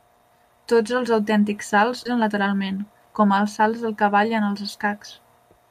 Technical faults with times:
2.05-2.07 skip ahead
2.15-3.14 jitter buffer speed-up

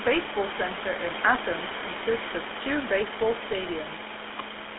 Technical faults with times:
0.00-4.78 GSM full-rate codec

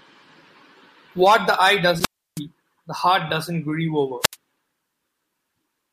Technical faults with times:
1.99-2.40 wireless microphone squelch dropout
4.21-4.36 wireless microphone squelch dropout

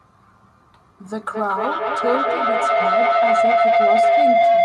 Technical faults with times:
1.04-4.65 feedback howl

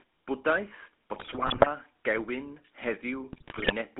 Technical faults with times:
0.00-4.00 GSM full-rate codec
1.14-1.69 GSM bit errors
3.32-3.73 GSM bit errors

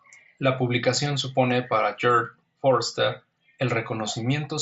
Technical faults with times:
none

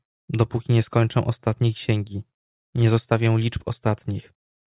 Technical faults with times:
none

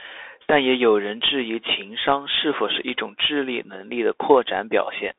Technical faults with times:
0.00-5.19 Bluetooth CVSD headset codec

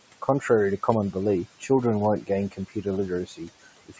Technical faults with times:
0.00-4.00 noise suppressor artifacts
2.51-2.86 speech cut by the noise suppressor
3.26-4.00 speech cut by the noise suppressor

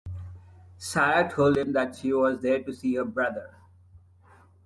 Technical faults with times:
none

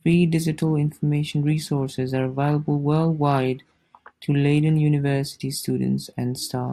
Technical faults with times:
none

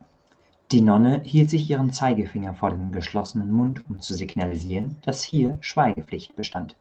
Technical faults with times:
2.35-6.60 repeated packet loss (robotic sound)

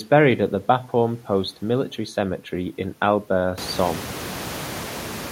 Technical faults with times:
none

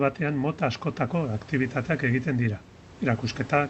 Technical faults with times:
none

